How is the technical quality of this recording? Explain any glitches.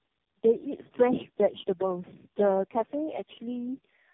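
The technical quality is poor throughout. The speech carries the combined damage of several low-rate speech codecs rather than any single one.

For the full clip, tandem speech coding degrades the sound. The signal was decoded and re-encoded at each network border. Each coder models an already distorted input, so errors pile up. The result is rough, muffled and warbly, with nothing above 3.6 kHz. The layering sounds consistent with about four speech codecs in a row, likely including AMR-NB at the ends.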